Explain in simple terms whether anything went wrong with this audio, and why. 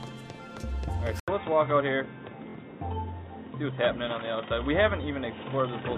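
At 1.2 seconds the sound briefly drops out for about 80 milliseconds. When it returns, it is dull and boxy, as if heard through a cheap headset. Nothing above 3.8 kHz comes through from then to the end. A faint new background hiss appears too, though the loudness stays about the same. This is likely an input switched to a poorer device. The recording probably jumped to a lower-quality microphone partway through.

Between 2.50 and 2.55 seconds there is a short Bluetooth stutter. For about 46 milliseconds, a tiny slice of sound repeats, making a quick buzzing flutter. This happens when wireless audio data arrives late or goes missing. The receiver keeps replaying its last bit of sound until fresh data turns up. The gap here fits roughly two lost packets. Afterwards the sound picks up further along, skipping what was missed.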